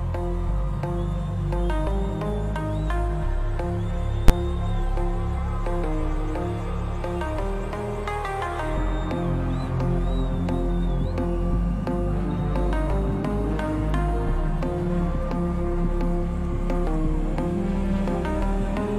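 At about 4.28 s there's a single hard bang, a case of invalid numbers hitting full scale. Some calculation blew up to infinite or invalid values, which got pinned at the maximum for roughly 12 ms, which fits a 512-sample block, too short to hear as anything but one loud crack.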